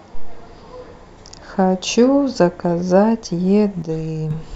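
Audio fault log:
3.82 to 4.31 s, one channel drops out: the speech suddenly sinks by about 6 dB for roughly half a second, then snaps back. That's likely one side of the stereo pair going silent, so the mono sum keeps only half of what both channels shared.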